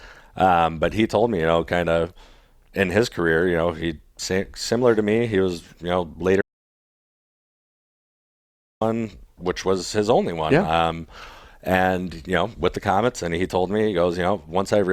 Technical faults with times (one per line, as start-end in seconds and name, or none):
6.41-8.81 audio dropout to silence